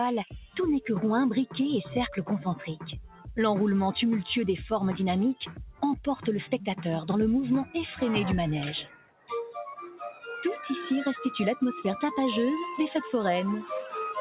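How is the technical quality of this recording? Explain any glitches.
The recording has been through a speech noise suppressor that fights the material. Everything is band-limited at 4 kHz, which fits a G.711 mu-law call leg at 64 kbps.

Across the whole clip you can hear a noise suppressor applied to music or sounds. It treats the steady, sustained parts as noise and keeps nudging them down, so the level swims by a few dB. Onsets punch through while held parts and tails sag, giving a pumping, thinning feel.

On top of that there are five spots of sound cut by the noise suppressor, where it clamps down much harder: 0.26 to 0.56 s (about 14 dB), 3.06 to 3.28 s (about 14 dB), 5.41 to 5.82 s (about 13 dB), 8.83 to 9.3 s (about 17 dB, the worst), and 9.92 to 10.24 s (about 9 dB). Each is a brief dip where the sustained sound hollows out or its decay gets chopped short.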